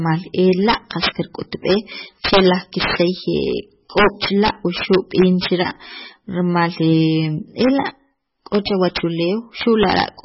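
From the first moment to the end, the speech sounds watery and swirly, with a hard ceiling at about 5.6 kHz and nothing above it, so s sounds are dull and chirpy and onsets smear. That's likely heavy MP3 compression. The encoder ran short of bits, cut the treble at a fixed point, and let weak frequency lines drop in and out from frame to frame. The damage fits a bitrate around 16 kbps.

On top of that, integer overflow hits six times: 0.69–1.09 s, 2.25–3.02 s, 3.98–5.67 s, 7.61–7.89 s, 8.55–9.00 s and 9.61–10.04 s. The level ran past the largest value the integers could hold, by about 14 dB in the first two stretches and about 2 to 10 dB in the rest. Rather than being limited, each peak wrapped to the opposite sign, so loud moments break into violent cracks far harsher than ordinary clipping.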